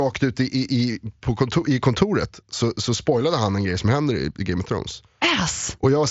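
Nothing goes wrong anywhere in this bit of speech, which comes through the wideband Bluetooth headset link (mSBC) just as that link normally sounds.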